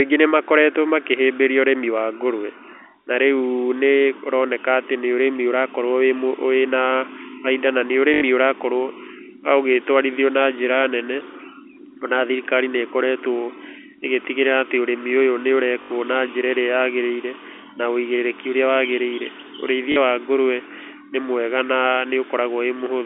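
Speech over a telephone-band line, with three short dropouts filled by packet loss with last packet repeated. Each gap is patched by replaying the last audio chunk. The run buzzes at about 50 Hz. The stutters fall at 8.14 to 8.22 s, just after "bainda na nĩ", and at 15.82 to 15.90 s, just before "na njĩra". Both last 80 ms. A 40 ms one comes at 19.92 to 19.96 s, before "wa ngũrũe nĩ mwega". The buzz fits 20 ms packets.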